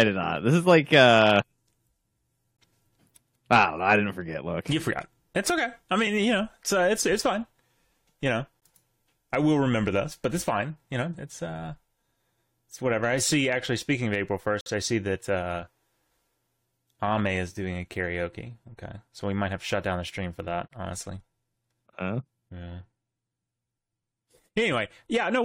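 At 2.57, 8.60, 14.61 to 14.66 (before "I see that uh") and 20.68 to 20.71 s (after "the stream for that"), gaps between stream segments cut hard silent holes into the speech. They recur every 6 s. Mistimed segments add 18 to 53 ms of silence, with nothing lost.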